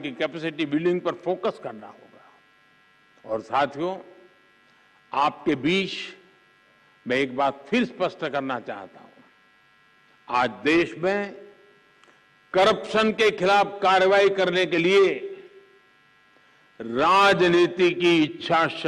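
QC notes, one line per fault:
Nothing to flag on this one, no problems turned up anywhere in it.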